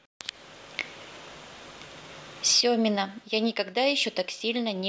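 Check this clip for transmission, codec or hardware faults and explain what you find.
One fault is present: one channel drops out. From 2.61 s to the end of the clip, the speech falls abruptly by about 6 dB and stays there. The cause is likely one side of a stereo feed being lost. When the two channels are summed to mono, material shared by both loses half its contribution. Anything carried only by the missing side vanishes entirely. The result is a sudden, sustained drop in loudness partway through.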